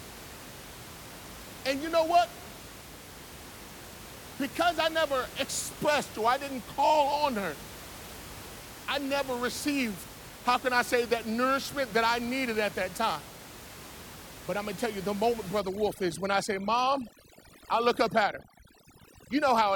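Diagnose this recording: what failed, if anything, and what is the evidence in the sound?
Overdone noise removal from 15.6 s onward, after "tell you the moment", in call processing. The suppressor shuts off frequency bands near its noise estimate, so room noise about 17 dB below the speech sinks to twinkling near-silence.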